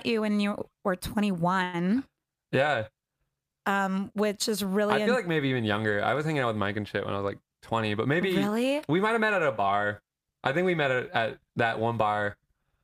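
A short stall from a late packet occurs at 1.63 to 1.75 s. A packet failed to arrive on time and the jitter buffer ran dry, so the receiver held the last stretch of speech for about 100 ms until the packet turned up, then resumed exactly where it had stopped. Nothing is lost, but the sound hangs unnaturally long with a faint buzzy, dipping quality, and everything after it runs 100 ms later.

A jitter buffer speed-up follows from 7.47 to 8.72 s, between "when I was like" and "we might have met". Having built up more audio than its target, the receiver trimmed the backlog by repeatedly cutting out tiny slices a pitch period or so long, removing roughly a tenth of a second in total. The speech plays about 8% faster while keeping its pitch, giving that passage a slightly rushed, hurried delivery.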